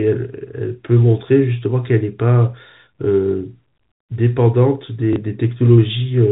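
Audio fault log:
5.13 to 5.16 s, packet loss with last packet repeated: about 30 ms of sound drops out and the preceding chunk replays in its place, which fits a single 30 ms packet. The copy ignores pitch cycles. It sounds like a small blip within the 4 kHz telephone band.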